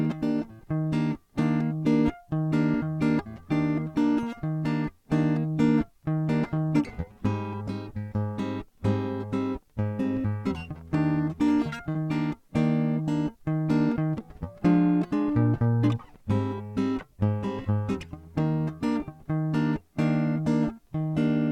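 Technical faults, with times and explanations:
11.89 to 11.98 s, burst of packet loss: a short run of consecutive audio packets never arrived in time, so the receiver filled the hole by stretching the last music it had, holding that sound for about 53 ms while fading it down, which is why the music briefly freezes and dims. When audio resumes, about 60 ms of the music has been skipped, so it restarts slightly ahead with a small jump.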